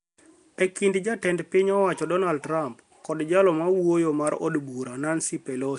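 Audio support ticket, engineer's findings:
Speech rough, hissy, smeared throughout; likely Nellymoser compression filling starved bands with noise. Spectrogram: hard ceiling at 10.6 kHz, speckled noise patches; fits a 44 kbps stream.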